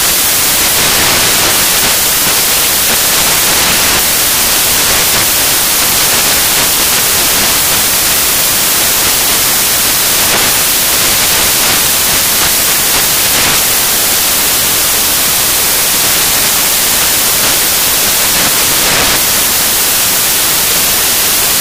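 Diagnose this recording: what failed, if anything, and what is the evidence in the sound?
Samples built from the wrong bytes, throughout: a sample-format conversion fault, where misassembled bytes promote noisy low bits, giving loud noise close to white on loud sounds.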